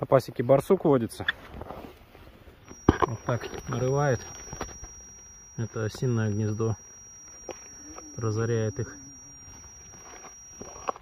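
A loudspeaker-to-microphone loop that is likely sitting right on the edge of instability produces a feedback whistle from 2.61 s to the end of the clip. The loop gain at one frequency is just high enough to keep re-exciting itself without building into a howl, so a thin, steady tone near 5.7 kHz hangs behind the sound, roughly 20 dB below it, swelling and fading slowly in level.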